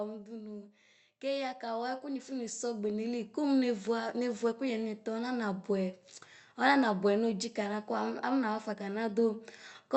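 A speech recording carried over a call link, with a clear case of automatic gain rising. From 1.2 s to 6.05 s the level climbs steadily, by about 13 dB in total. The voice and the room noise swell together. That shared rise is the giveaway. A gain control judged the input too quiet and kept turning it up over almost five seconds. The call codec's band limit sits near 8 kHz, which fits a wideband Opus setting.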